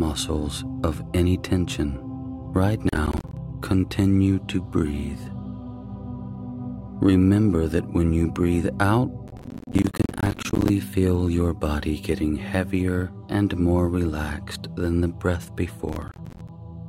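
Three bursts of gritty crackle tear through the sound, from 2.89 to 3.37 s, 9.28 to 10.69 s and 15.89 to 16.49 s. This is processor overload crackle: repeated missed deadlines on buffers of around 10 ms each leave tiny silent gaps with hard edges.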